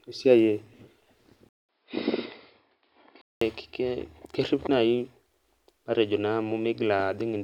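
At 1.49 s a 200 ms gap opens, then the speech goes dull and roughly 10 dB quieter with nothing above 5.2 kHz until 3.41 s, likely an input switched to a poorer device.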